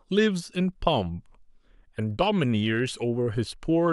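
No technical faults can be heard anywhere in this speech recording, with the signal holding steady and continuous throughout.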